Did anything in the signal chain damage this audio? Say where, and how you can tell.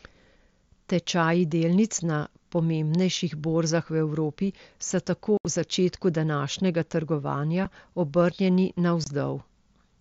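Yes, unconcealed Bluetooth headset packet loss on the wireless link, carried through the mSBC headset codec. Speech drops out with abrupt edges at 5.37 to 5.45 s, between "so tako" and "v začetku današnjega", then at 7.65 s and 9.04 to 9.07 s. A concealed loss would be bridged with smoothed or repeated sound; these holes are left bare.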